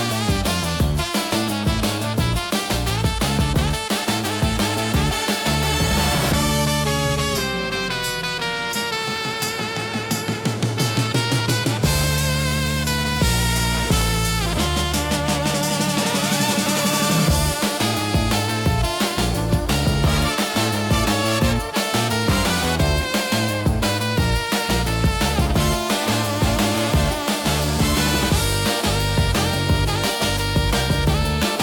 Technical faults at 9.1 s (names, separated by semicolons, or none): none